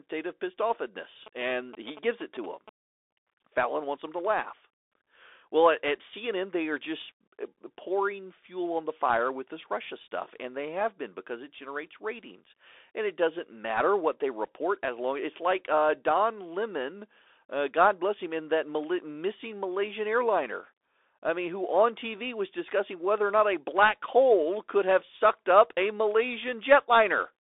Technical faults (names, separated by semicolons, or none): Bluetooth CVSD headset codec; GSM signalling bursts